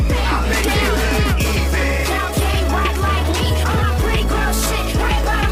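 The audio contains a time-stretched section from 1.39 s to the end at 5.51 s. The pace jumps abruptly to about 1.35 times faster and sounds rushed, yet the pitch does not rise as it would with a plain speed change. This is likely software that shortened the passage to fit a length, dropping brief pieces to hold the pitch steady.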